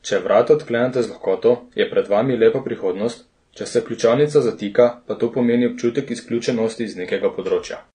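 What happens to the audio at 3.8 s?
As throughout, the speech at 3.8 s shows AAC compression. Nothing sounds above 9.7 kHz. It is dull and smeared, likely from a low-bitrate AAC-LC encode.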